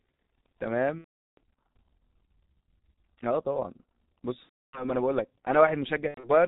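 From the start, the speech carries heavy G.723.1 codec damage at about 6.3 kbit/s. Nothing above 4 kHz survives, so the sound is muffled and band-limited. The codec's 30 ms frames and slowly updated vocal-tract model smear fast transitions, which leaves consonants blurred and gives voiced sections a hoarse, grainy texture across the whole clip.

VoIP packet loss concealed by the speech codec then appears at 0.99 to 1.38 s, where about 390 ms of audio is missing, which fits 13 consecutive 30 ms frames. A second gap runs from 4.43 to 4.94 s, with 300 ms missing, consistent with 10 frames. A third spans 6.08 to 6.30 s, with 120 ms lost in pieces over about 180 ms and the longest single run 90 ms. In each gap the decoder repeats its last pitch and filter at falling gain. The result is a stretched, buzzy tone or coloured noise that fades, and weak, distorted speech lingers briefly after each gap while the decoder recovers.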